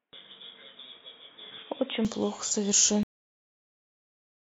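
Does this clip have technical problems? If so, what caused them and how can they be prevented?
Yes. From the start to 2.05 s the speech is band-limited, with nothing above 3.8 kHz. It is a few dB quieter and carries a faint, different noise floor, then clears abruptly with no gap. This likely comes from an input switched to a poorer device, such as a headset's call profile. Prevention: lock the recording input device and disable automatic device or profile switching.

At 3.03 s the clip has a cut-off end. The speech halts mid-sound and drops straight to digital silence with no natural decay, because the final buffers were never written out. Prevention: flush and close the recording buffers fully before stopping the stream.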